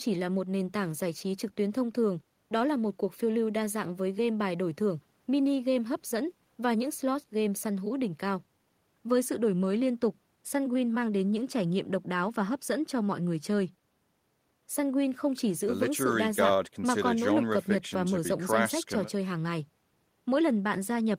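Nothing in the speech stood out as a technical fault on listening.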